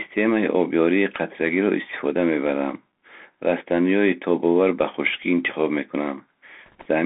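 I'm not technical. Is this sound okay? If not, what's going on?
No. The whole clip has been through a Bluetooth CVSD headset codec, the basic voice system older headsets use. It squeezes speech into a narrow band, roughly 250 Hz to 3.5 kHz, so everything sounds thin and boxed-in, like a phone call. It builds the sound one tiny up-or-down step at a time, so sudden loud, bright sounds outrun the step and distort, s sounds turn scratchy, and a grainy hiss sits under the speech. That damage is plainly audible.

Near the end, from 6.66 to 6.86 s, there are bit errors on a Bluetooth voice link. For about a fifth of a second, flipped bits corrupted a small share of the data, on the order of one or two bits in every hundred. Because each bit in this system only nudges the sound slightly, the result is a brief rushing, crackly noise over the speech rather than sharp clicks.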